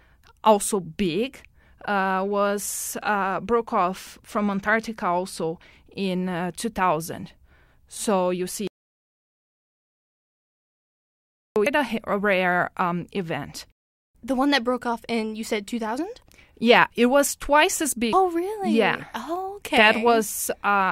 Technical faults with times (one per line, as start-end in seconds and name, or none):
8.67-11.56 audio dropout to silence
11.66-11.69 damaged data in a compressed stream
18.13-18.16 damaged data in a compressed stream